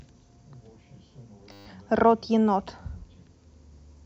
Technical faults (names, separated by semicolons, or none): system hang loop